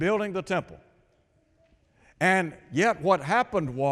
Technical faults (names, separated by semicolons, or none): none